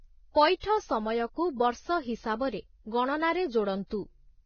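Heavy lossy coding, likely Vorbis compression at a rate that fits around 17 kbps, removes everything above 6.5 kHz and coarsely quantises the treble, leaving the speech hissy, grainy and dull. From 0.60 to 0.63 s, pre-echo appears: quantisation noise spread across the transform block arrives about 35 ms before a sharp onset, so a brief hiss precedes it and softens the attack.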